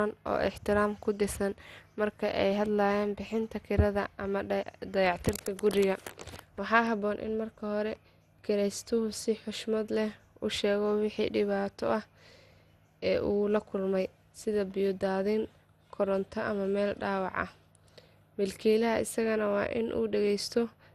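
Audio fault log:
Throughout, generation loss. The speech sounds swirly, smeared and hollow, with blurred consonant attacks and no content above 15.8 kHz. This is more damage than a single pass at this quality would leave. The sound points to an MP2 chain at about 96 kbit/s, likely re-encoded around ten times. Each pass quantises again on a shifted frame grid. The noise and spectral holes stack up, and transients lose their edges.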